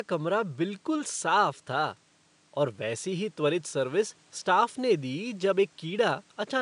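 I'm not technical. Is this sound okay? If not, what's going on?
Yes, the sound is fine, with nothing going wrong in how it was recorded or played back. A faint background noise from the room can be heard well beneath the speech, which is simply part of where it was recorded.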